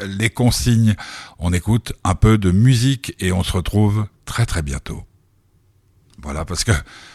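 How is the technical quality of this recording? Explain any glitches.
No technical faults are audible.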